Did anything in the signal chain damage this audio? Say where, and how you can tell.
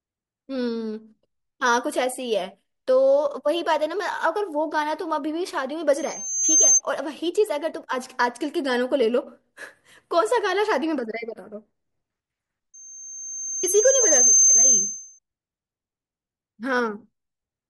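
Yes. A loudspeaker feedback squeal in the acoustic loop from playback back into the microphone. A pure 6.3 kHz tone swells at 5.97–6.81 s and 12.74–15.19 s, reaching roughly 10 dB above the speech. Loop gain there exceeded one, so the tone grew by itself.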